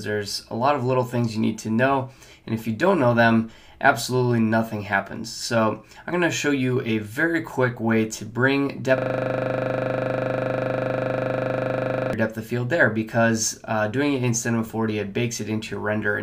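At 8.98 s the system hangs while the audio hardware keeps replaying its last ring buffer, so a single 40 ms slice repeats exactly until 12.13 s. Looping 25 times per second, this system hang loop fuses into a steady, rough buzz.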